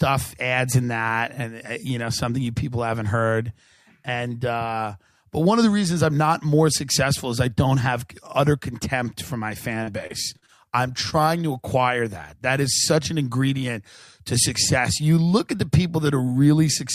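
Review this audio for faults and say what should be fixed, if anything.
Repeated packet loss (robotic sound) runs from 9.83 to 10.50 s. Four holes, the longest 36 ms and about 120 ms in total, were each patched by extending the preceding sound. Roughly a sixth of that stretch is synthetic, so it comes across as choppy and mechanical. A steadier network path and a deeper jitter buffer would prevent this.

Short concealed packet loss occurs at 11.10 to 11.14 s. About 20 ms of audio never arrived in time. The receiver bridged the gap by continuing the last sound and then blending back into the real signal, which leaves a brief smear. Forward error correction or packet redundancy on the link would let the receiver rebuild the lost piece instead of guessing it.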